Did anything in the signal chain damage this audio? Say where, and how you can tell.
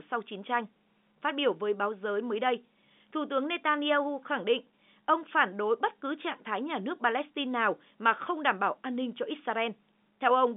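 No, nothing in the signal chain damaged this audio.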